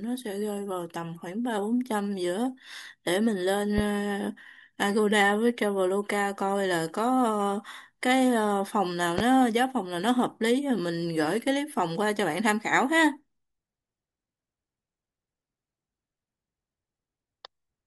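Loud pops hit at 3.78 to 3.82 s and 9.18 to 9.22 s, about 10 and 15 dB above the speech. Each is a single sharp thump, likely from an electrical voltage spike.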